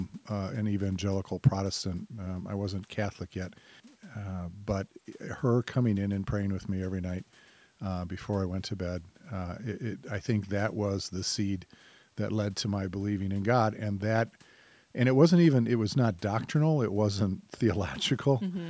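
Nothing's wrong here: it's speech that's gone through a call's microphone processing, so the very lowest bass is trimmed and nothing sits above 8 kHz, which is just how that path is meant to sound.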